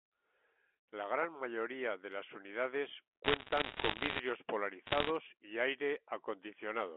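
Telephone speech carried over a G.711 mu-law line, band-limited to about 250 Hz to 3.4 kHz, is hit by bit errors on a digital phone line from 3.24 to 4.20 s and again from 4.86 to 5.09 s. Flipped bits, at a rate of roughly one and a half percent, corrupt single samples, and the hits on sign or high-order bits produce sharp ticks that build into crackle over the speech. On the waveform they show as isolated one-sample spikes, and on a spectrogram as thin vertical broadband lines.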